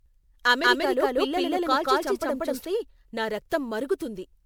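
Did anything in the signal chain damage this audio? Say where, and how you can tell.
Yes. Generation loss runs through the whole clip. This is a codec-stage fault. The speech sounds swirly, hollow and smeared, with blurred attacks, and content reaches about 20.9 kHz. It likely comes from repeated MP3 encoding at about 128 kbit/s, around three passes, with each pass adding its own quantisation noise and spectral gaps.

A doubled audio track appears from 0.63 s to 2.65 s. A full-band copy at about the same level trails by roughly a fifth of a second, with no decay or room colour, and it starts and stops abruptly. That points to a duplicated signal path or editing stage, likely a second, slower capture mixed back in.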